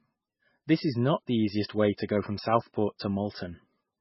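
A speech clip that sounds thin and swirly from start to finish, with nothing above 5.6 kHz and weak detail fluttering in and out, most likely from heavy MP3 compression at a rate that fits roughly 16 kbps. Starved of bits, the encoder chops the treble at a fixed point and drops quiet frequency lines frame by frame, leaving a watery, metallic texture and smeared onsets. A plain low-pass filter would dull the top but stay steady, without this warbling churn.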